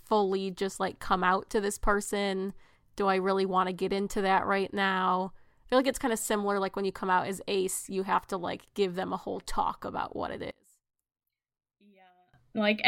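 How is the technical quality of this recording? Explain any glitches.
One glitch stands out. From 10.51 to 12.34 s, one channel inverted is the likely cause: mono summing cancels the shared speech, dropping it about 30 dB to a faint residue.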